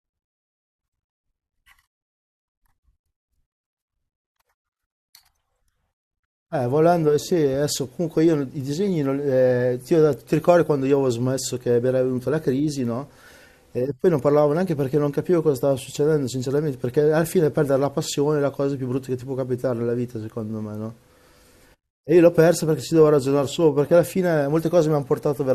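No technical faults are audible anywhere in the recording.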